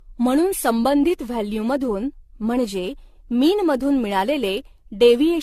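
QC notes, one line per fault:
Throughout, generation loss: the speech was likely decoded and re-encoded around seven times through a lossy codec, consistent with AAC-LC near 64 kbit/s, each pass re-quantising on a shifted frame grid. Accumulated noise and spectral holes leave it swirly, hollow and smeared, consonant attacks blurred, nothing above 14 kHz.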